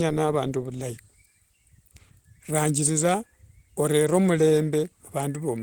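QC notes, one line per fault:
Throughout: Opus voice compression, plainly audible. A linear-prediction coder with coarsely quantised excitation carries the speech below 8 kHz, giving a hoarse, slightly robotic edge. A transform layer fills the band to 20.2 kHz. This fits hybrid mode near 16 kbps.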